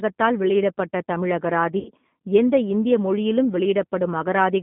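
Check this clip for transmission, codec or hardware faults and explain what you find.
Two faults are present. Throughout, the sound fits a G.729 codec at about 8 kbit/s: a pulse-based model rebuilds the speech, leaving it band-limited to 150 Hz to 3.6 kHz, plainly rough and synthetic. From 1.79 to 1.91 s, between "வெளியிடப்பட்ட தமிழ்" and "எந்த இந்திய மொழியிலும்", there is VoIP packet loss concealed by the speech codec. About 60 ms of data, which fits three lost packets, went missing, and the decoder stretched its last pitch and filter into a fading sound, with weakened speech lingering briefly afterward.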